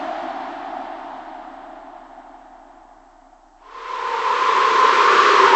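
Wrong sample rate, present from start to finish: the samples are clocked out at half the speed they were captured at, with no resampling, which fits 48 kHz material being played back at 24 kHz. Because timing and frequency are tied to the same clock, both drop together. Everything runs at 0.5 times normal speed and sits a full octave, 12 semitones, lower, so the sounds come across as dragged out, heavy and unnaturally deep.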